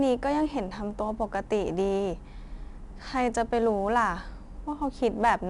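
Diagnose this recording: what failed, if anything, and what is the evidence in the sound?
4-bit ADPCM compression runs through the whole speech clip, a codec-stage fault. Every louder stretch carries a gritty hiss that rises and falls with the level, and sharp onsets sound roughened where the adaptive step size lags behind sudden jumps in the waveform. Each sample is coded as a coarse 4-bit step from a prediction, so the quantisation error rides on the signal. Nothing survives above 10.7 kHz, pointing to a reduced sample rate, and the damage fits a rate of about 89 kbps.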